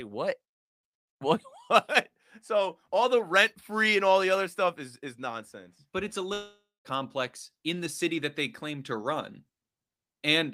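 From 6.33 to 6.87 s the speech breaks off. The last sound smears into a fading buzz, then about 0.2 s of silence follows. Speech resumes with roughly half a second missing. This is likely a long network dropout, with the receiver concealing the gap.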